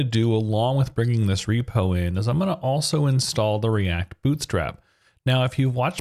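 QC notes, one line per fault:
Nothing stood out on listening.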